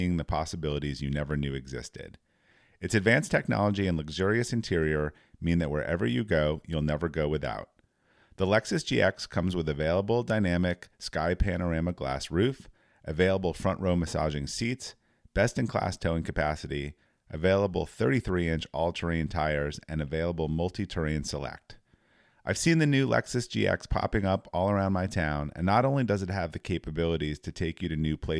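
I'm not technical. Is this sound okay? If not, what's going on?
Yes, nothing wrong can be heard in this recording.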